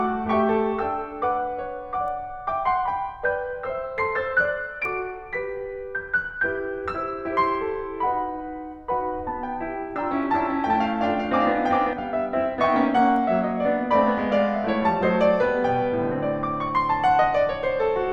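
A music clip with a doubled audio track from 10.23 to 11.93 s: a full-band copy about 5 dB quieter trails the music by roughly 0.4 s, likely from a second, slower capture path. On a spectrogram the same patterns reappear shifted right, undecayed, starting and stopping abruptly.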